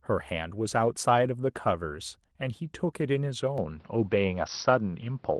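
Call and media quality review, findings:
Lost packet rebuilt from error correction, 1.87–1.93 s: a brief rough, noisier patch with no gap, about 40 ms long, which fits two lost 20 ms frames. Opus in-band FEC supplied low-bitrate copies from the following packets, and the decoder played those instead.

Input switched to a poorer device, 3.58 s to end: a sudden dull, narrowed tone with no silence at the change, nothing above 5.8 kHz, a modest level shift and a new faint noise floor. The likely cause is capture moving to a lower-bandwidth microphone or headset call profile.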